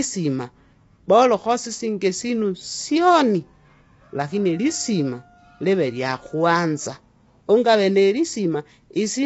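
From start to end, the speech carries plainly audible coding damage, likely from low-delay AAC compression. Its short frames resolve harmonics poorly, leaving grainy noise between them. Nothing remains above 7.7 kHz. The damage fits a low bitrate near 24 kbps.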